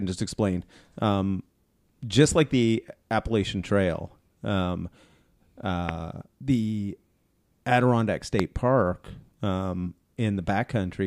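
A couple of loud pops hit at 5.89 s and 8.40 s, each a single sharp click roughly 15 dB above the speech, likely a brief voltage spike from a plug, switch or static.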